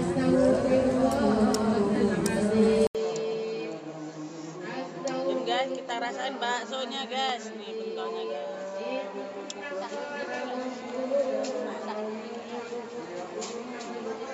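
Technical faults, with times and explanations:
2.87–14.34 s, input switched to a poorer device: after an 80 ms silence the sound drops about 10 dB, loses everything above 7.6 kHz and gains faint new hiss, likely from a narrower-band microphone. A spectrogram goes dark above 7.6 kHz; the waveform shows a flat gap and a smaller envelope.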